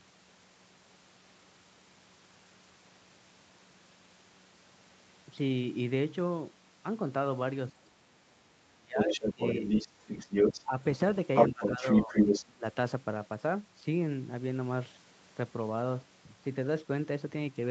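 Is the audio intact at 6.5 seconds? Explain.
Yes, the speech at 6.50 s is intact, with no fault at that moment.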